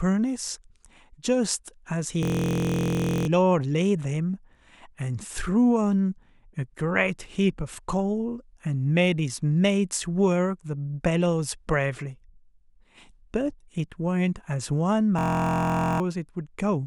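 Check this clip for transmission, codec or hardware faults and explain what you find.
There's a system hang loop, twice: 2.23 to 3.27 s and 15.19 to 16.00 s. The playback stalled while the hardware kept replaying one 23 ms buffer, which fits a 1024-sample buffer, so it buzzes at about 43 Hz, dropping roughly a second of speech, then under one.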